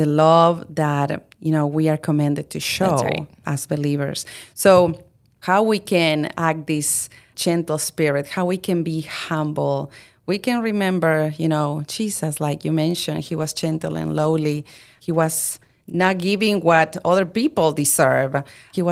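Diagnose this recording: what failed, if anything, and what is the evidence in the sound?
The failure is a call bitrate drop at the network and codec stage, starting at 13.2 s and lasting to 18.79 s, with the worst stretch holding for about 4.5 s. The speech turns coarser and more muffled, which fits the encoder being pushed from around 48 kbps down to about 18 kbps after the bandwidth estimate fell. On a spectrogram the upper band thins and then cuts off sharply, and the remaining detail looks smeared and blocky.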